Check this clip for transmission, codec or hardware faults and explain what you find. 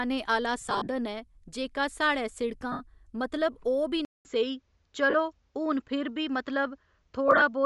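The clip has three kinds of fault: codec damage throughout, four bursts of lost frames, and a change of input device partway through.

Bluetooth LC3 compression is the likely cause of a grainy, breathy edge on the speech across the whole clip. At this rate the encoder discards much of the upper spectrum and replaces it with shaped noise, so sibilants and the top of the voice sound synthetic rather than simply dull. The damage is plainly audible, and the character fits a 48 kbps LC3 stream using 7.5 ms frames.

Lost LE Audio frames occur at 0.60–0.88 s, 2.72–2.81 s, 5.10–5.14 s and 7.28–7.42 s. The decoder covers each gap by repeating the last spectrum with randomised phase. The speech therefore turns into a brief noisy smear instead of a click or a dropout. The first burst totals about 165 ms of concealment scattered over 270 ms, with runs of up to about 50 ms. The others total 82.5 ms, 37.5 ms, and 75 ms spread over 135 ms.

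Input switched to a poorer device is the likely cause of the change at 4.05 s. About 200 ms of silence comes first. From there to the end, nothing above 7.6 kHz remains, so the speech sounds duller and boxier. The level shifts by about 5 dB, and a new noise floor appears about 50 dB below the speech. That combination suggests a different microphone or a headset call profile took over.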